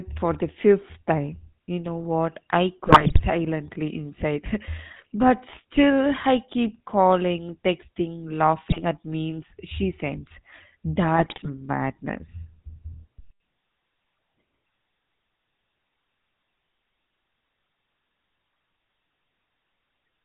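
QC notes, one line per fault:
Throughout, GSM full-rate codec: the whole clip has that buzzy, gravelly edge, with nothing above 4 kHz, which fits the old 13 kbps full-rate scheme. The codec rebuilds the voice from a vocal-tract filter driven by a coarse pulse train, keeping only a fraction of the excitation detail. That sparse excitation is where the rasp comes from, and the missing top end makes everything sound boxed-in and dull.
2.86–3.22 s, 8.66–8.81 s and 11.16–11.50 s, GSM bit errors: three short bursts where the voice breaks into squawks, pops and gargling. The first comes right after "know what I", and the second ends just before "at memes she sends". These sound like a few percent of bits getting flipped on a weak link, which would corrupt the filter, pitch and gain values in a run of frames. The spectrum bends or the level jumps for those frames, which gives the garbled, blurting character.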